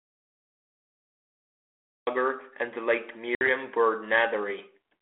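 Speech carried over a G.726 ADPCM line at 32 kbit/s, band-limited to 300 Hz to 3.4 kHz, with two faults. The clip opens in an audio dropout to silence already under way, lasting until 2.07 s, where the sound comes in mid-flow with "and the late". The gap is silent with no room tone, most likely the input being lost while the recorder kept writing. At 3.35 s, after "and the late", there is packet loss on the ADPCM call: a hard-edged hole of about 60 ms, consistent with several packets going missing, after which the decoder's predictor and step size are out of step with the sender's. Speech returns at 3.48 s slightly distorted before settling.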